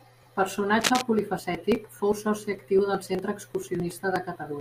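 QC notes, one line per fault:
0.79–1.01 s, cable scratch noise: a burst of dense, ragged crackle sits over the speech for about 0.2 s, roughly as loud as the speech itself, ending just before "polifacètic fou". This likely comes from a worn cable or connector being moved, its contact resistance changing rapidly.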